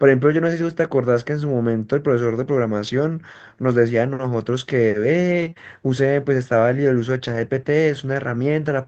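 At 0.61 s and again from 2.87 to 2.89 s, a lost packet rebuilt from error correction fills about 20 ms with a rougher, noisier low-bitrate copy carried in the following packet, so there is no gap. From 5.41 to 5.47 s the same happens over 40 ms. Short concealed packet loss follows immediately, at 5.49 to 5.53 s and 5.53 to 5.58 s: each missing 20 ms is extrapolated from the preceding sound and blended back in, giving a brief smear or wobble. From 7.28 to 7.38 s, 60 ms is again rebuilt from error correction and sounds grainy. All of this rides on an Opus call path whose audio band stops around 8 kHz.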